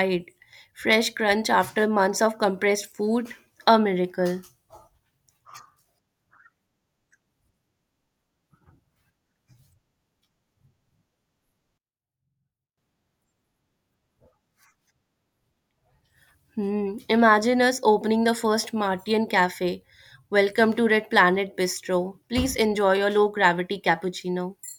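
One channel inverted, 11.78 to 12.77 s: the speech drops about 23 dB to a faint trace, likely reversed polarity cancelling the shared sound in mono.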